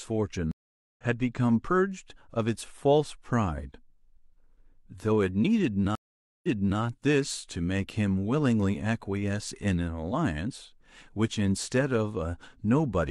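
Two stream reconnects: at 0.51 s the speech drops out for 470 ms, then resumes about half a second later; at 5.95 s a 480 ms gap returns 372 ms earlier, repeating speech.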